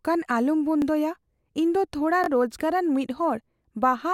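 A repeated buffer at 0.82 to 0.84 s and again at 2.24 to 2.28 s, just after "ᱫᱚ ᱛᱷᱚᱲᱟ", comes from fresh audio arriving late. The device replays a 20 ms slice, twice at first and then three times, with hard seams that produce a brief buzzy stutter.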